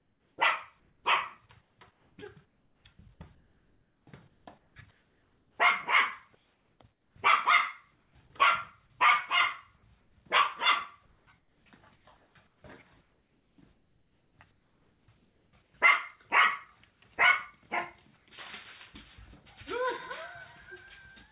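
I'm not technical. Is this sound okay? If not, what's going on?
No. In the quiet stretches, the real background gives way to a flat, featureless hiss: 0 to 8.15 s, 10.01 to 10.16 s, 11.06 to 15.74 s, 16.91 to 17.0 s and 18.17 to 18.26 s. In the three short gaps it is also a little quieter. This is comfort noise in place of the background, likely from the call pausing transmission and filling the gaps with synthetic noise.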